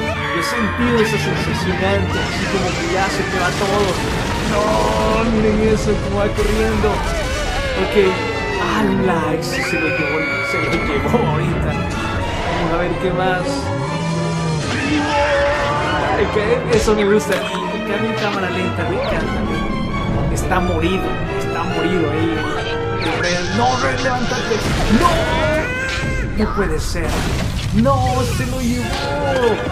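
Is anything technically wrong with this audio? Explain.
Yes. There are three Bluetooth SBC bit pool drops, at 5.18 to 6.16 s, 13.38 to 17.15 s and 22.56 to 24.29 s. In each, the link seems to get congested, and the encoder spends fewer bits per frame. The sound fits a bit pool halved from 31 to 15, near 105 kbps. The highest sub-bands get starved, and the rest are quantised coarsely. The treble turns dull and a gritty noise rises. Full brightness returns when the rate recovers.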